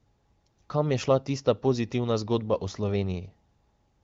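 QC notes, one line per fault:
Nothing stood out on listening to this speech clip.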